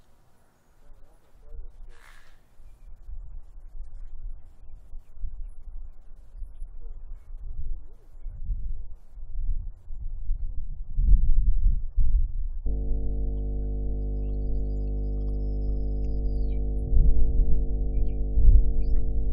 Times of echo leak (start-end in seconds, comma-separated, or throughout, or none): none